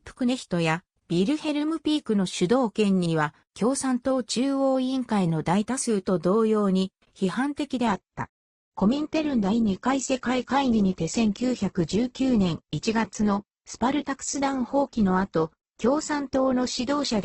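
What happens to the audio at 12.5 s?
At 12.5 s you're in the middle of a stretch where the adaptive stream has dropped to a lower bitrate, running from about 7.87 s right to the end. The connection slowed, so the player swapped to a much leaner version of the stream. The quality falls suddenly with no gap: everything above 8.2 kHz is gone, and the rising codec artefacts fit a shift from a healthy Opus rate down to something near 12 kbit/s.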